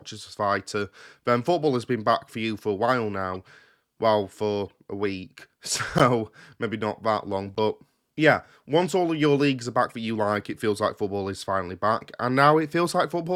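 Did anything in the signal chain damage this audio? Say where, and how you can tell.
Yes. Corrupt frames were decoded at the codec stage: bit-flipped compressed frames were played anyway, and their misread gains and codes put energy at wrong frequencies. Brief chirps and noise bursts, each a few frames long, occur at 3.32–3.36, 4.69, 5.98–6.01 (the loudest), 7.55–7.58 and 9.90–9.93 s.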